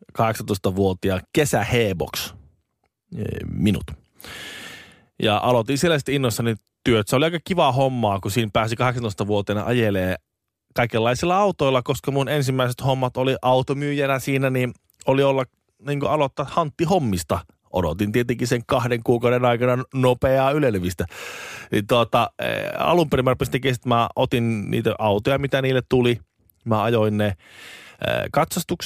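A speech recording whose signal shows no audible technical faults anywhere along its length.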